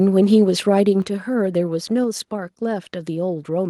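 Microphone volume stepped down at 1.02 s: the speech and the background beneath it drop together by about 5 dB in a single instant, with no gradual fade, and stay at the lower level from then on. The likely cause is the call software judging the microphone input too hot and cutting the device's input volume in one step, so everything captured afterwards arrives quieter, including the room sound between phrases.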